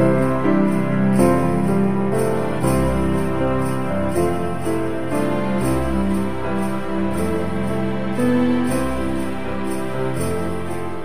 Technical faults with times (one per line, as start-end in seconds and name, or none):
0.00-11.04 DC offset